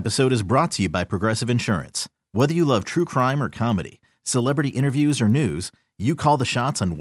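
From 1.6 s right through to the end of the speech, you get a steady ticking at 10 Hz, one tick every 100 ms. That's a resampler restarted on every block: each chunk got converted on its own, so the filter at every block edge saw silence or wrapped-around samples instead of its real neighbours. The ticks ride on the signal and fade in pauses, and they fit an upsampling from 24 kHz to 48 kHz done block by block.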